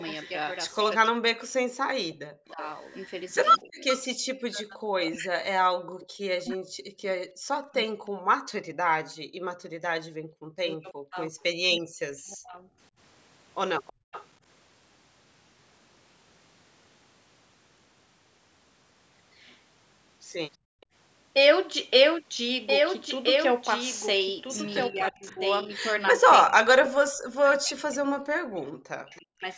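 Throughout the clip the speech is heard twice: a second, full-band copy trails the original by roughly a second and a half, a few decibels quieter, with no room colour or decay of its own. This doubled audio track most likely comes from the same signal being captured again along a slower path, or an edit holding two copies out of step, so the two layers run side by side for the whole recording.

From the start to 3.98 s a faint repeat of the speech sits about a third of a second behind it, well down in level, roughly 20 dB under. This is an echo leak, likely from a loudspeaker on one side whose echo canceller let part of the microphone pickup through and sent it back, here with a fixed delay of 326 ms.

Overlapping that, between 0.97 and 12.61 s, the speech keeps dipping and breaking up. It fades or cuts out in pieces, at worst around 40 dB down, for about seven seconds in total. This is speech suppressed in double talk: both sides were talking at once, and the echo canceller, likely unable to tell its own talker from the loudspeaker echo, turned everything down.

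Within that stretch, between 7.38 and 9.83 s, the room sound briefly drops away, for only about a fifth of a second in total and as far as about 39 dB down. That is background gated by the echo canceller, which clamped the microphone hard while the loudspeaker played and released it moments later.

The echo leak returns from 11.4 to 14.26 s, stronger this time at roughly 15 dB below the speech, again trailing by 326 ms. Near its end, from 13.93 to 14.12 s, the background is gated once more, sinking by about 39 dB for around 0.2 s before coming back.

At 20.57 to 20.88 s the room tone cuts out again for about 0.3 s, dropping by about 40 dB as the canceller gates the microphone. Inside that gap, around 20.81 to 20.86 s, a barely audible scrap of the delayed echo slips through, very faint at about 35 dB under the speech.

From 24.88 s to 29.47 s the speech is again suppressed in double talk. 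It is chopped and pulled down by as much as about 40 dB, over roughly four seconds in all, as the canceller reacts to both sides speaking together. The call's microphone processing is also audible across the clip: nothing reaches above 8 kHz, and the lowest bass is trimmed as expected.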